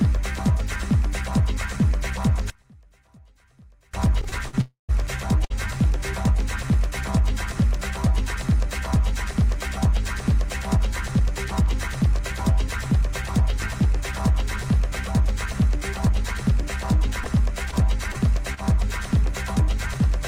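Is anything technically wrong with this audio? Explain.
Yes, there's a cluster of network-style glitches early on, a polarity problem, and some tempo and dropout trouble later.

From 2.5 to 3.94 s the level drops by about 30 dB, leaving a faint ghost. One channel is likely inverted, so the shared content cancels when the channels are summed to mono.

Between 4.21 and 4.55 s there's repeated stalls (stutter). The jitter buffer ran dry four times, longest 50 ms, and stretched last sounds for 97 ms total, so it drags and hiccups.

At 4.61 to 4.91 s comes a call audio freeze. The sound holds, fades, then sits silent for 140 ms, inserting 277 ms before resuming, likely from packets held up in transit.

Around 5.45 to 5.52 s there's a short stall from a late packet. The receiver held the last sound 55 ms until it arrived, so you hear a brief smeared hold.

Jitter buffer speed-up hits twice: 10.77 to 11.68 s at 104% speed, trimming about 50 ms, and 16.09 to 17.09 s at 103%, trimming about 40 ms. 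The buffer is dumping excess delay, so it runs slightly faster at unchanged pitch.

Finally, scattered short gaps run from 17.24 to 18.59 s. About four lost packets, each around 30 ms at most, were patched, with 80 ms genuinely missing, giving little ticks and smears.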